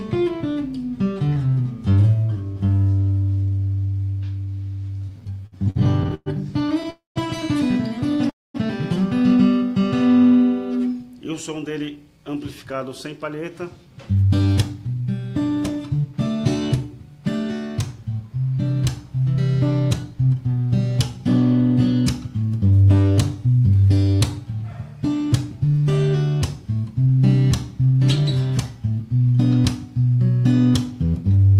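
From 5.09 to 6.86 s the sound drags and stutters, catching fifteen times as short fragments are stretched, the longest about 116 ms. These are repeated stalls (stutter): packets arrived late, the jitter buffer kept running dry, and the receiver extended the last sound each time, roughly 0.35 s in total, without losing anything.

At 6.90 to 7.18 s and again at 8.30 to 8.56 s the audio halts for about a quarter of a second. A fading continuation drops into silence, for 150 ms and 220 ms respectively, then resumes where it stopped. This is a call audio freeze, likely from packets held up in transit that emptied the buffer, inserting a gap.

From 10.72 to 15.02 s the audio runs hurried at about 109% speed with unchanged pitch, and briefly again from 23.03 to 23.75 s at about 108%. This is a jitter buffer speed-up. The receiver trimmed pitch-period-sized slices, around 0.4 s in the first span and under a tenth of a second in the second, to shrink excess delay.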